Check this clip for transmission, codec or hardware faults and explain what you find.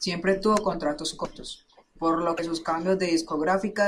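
Two short glitches stand out in this speech clip. The likely cause is a broken MP3 bit reservoir. At 1.24 s, right after "tuvo contratos", the sound jumps and garbles for about 30 ms. At 2.37 s, after "por lo", it does so again for about 28 ms. Frames seem to have been dropped. The next frame then reached back for borrowed data and decoded bytes from the wrong frame. Each glitch spans roughly one 24 ms frame.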